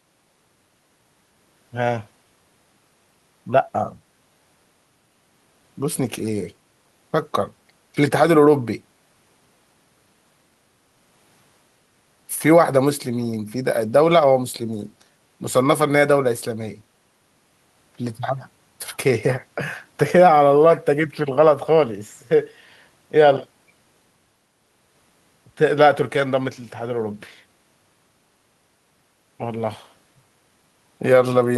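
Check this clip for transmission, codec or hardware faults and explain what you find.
Nothing faulty can be heard anywhere in this recording.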